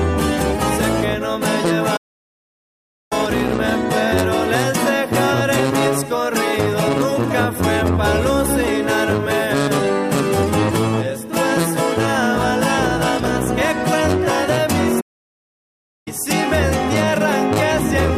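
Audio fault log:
1.96–3.13 s and 15.00–16.08 s, playback stall: the sound just drops out mid-flow for about 1.1 s each time, then carries on. That's likely the player starving for data or its thread getting blocked, leaving dead silence until it catches up.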